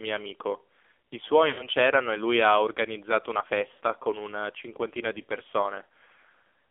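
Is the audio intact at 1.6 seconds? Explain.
No. Lost AMR speech frames cause a dropout from 1.48 to 1.69 s. Frames failed their checks, so the decoder repeated the last good pitch and vocal tract settings at falling gain. The sound smears, then fades toward silence. It returns weak and rough. About 100 ms was lost.

The AMR narrowband mobile codec also affects this moment. The band stops near 300 Hz and 3.5 kHz. Heavy buzzy, synthetic damage points to a low rate of about 5.9 kbps.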